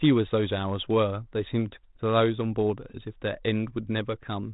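No technical faults can be heard anywhere in the speech. It passes through G.726 ADPCM at 32 kbit/s, which leaves only light coding texture and nothing above 3.8 kHz, giving it a narrowband telephone quality.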